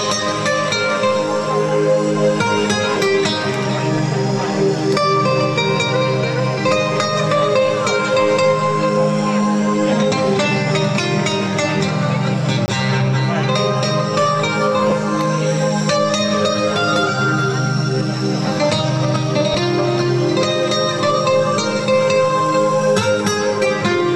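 At 12.66 to 12.68 s the output buffer likely went unfilled in time, leaving a 20 ms block of digital silence. The audio drops straight to silence and returns with no fade, and the gap registers as a brief hole.

At 14.90 s and again at 19.53 s, Bluetooth LE Audio frames were lost and the LC3 decoder concealed them by repeating the previous spectrum with randomised signs. The first loss covers 15 ms, consistent with two 7.5 ms frames; the second lasts 7.5 ms, matching a single frame. In each, any tones turn into a momentary noisy smear rather than a clean dropout.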